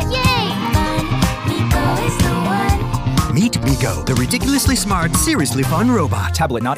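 No technical faults can be heard anywhere in this audio.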